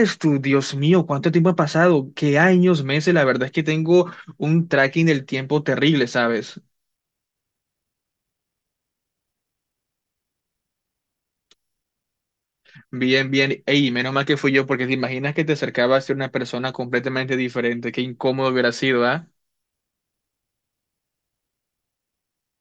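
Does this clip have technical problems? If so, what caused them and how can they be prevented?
No, there are no audible technical faults in this speech recording, so there is nothing to trace or prevent.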